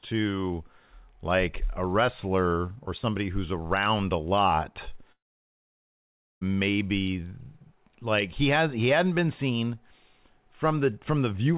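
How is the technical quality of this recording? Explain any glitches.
The recording has one clear glitch, a gap of about 1.3 seconds. Throughout, the band stops at 4 kHz, as a G.711 call path would produce.

From 5.12 to 6.43 s, after "who's around a lot", the sound smears into a fading buzz, then goes nearly silent for about 1.2 s. This is likely a long network dropout, with the receiver stretching the last sound before giving up. A spectrogram shows a blurred, fading band and then an empty column, while the waveform flattens until the audio resumes with that stretch missing.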